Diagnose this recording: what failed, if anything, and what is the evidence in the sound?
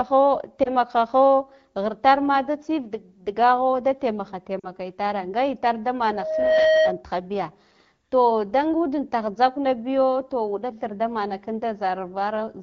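Two spots of lost AMR speech frames, a network and radio fault. At 0.63–0.71 s there's a brief dip and warble, consistent with a single lost frame. At 4.59–4.67 s, right before "itare nga itar da", it's longer and drops to near silence, like a couple of frames. The decoder stretched the last good frame with falling gain.

Then a loudspeaker feedback squeal from 5.98 to 7.04 s, just after "itare nga itar da". A single 631 Hz tone swells over roughly half a second to sit about 5 dB above the speech. The mic was picking up its own loudspeaker, and the loop gain went above one at that frequency.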